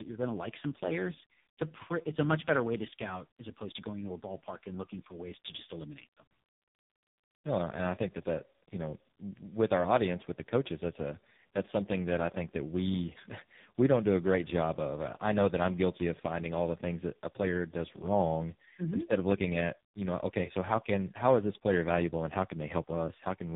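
Tandem speech coding runs through the whole clip. The speech sounds like it went through two speech codecs in a row, likely a G.726-type coder feeding a low-rate AMR-NB. It's gritty, muffled and warbly, with nothing above 3.7 kHz.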